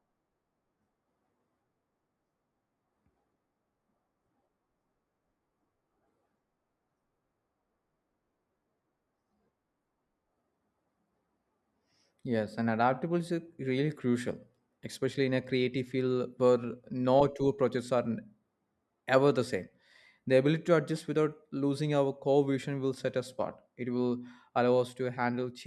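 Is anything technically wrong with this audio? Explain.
No, the speech signal has no technical faults that can be heard anywhere in the recording.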